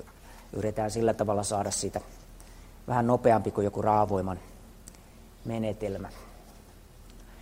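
No technical faults are audible.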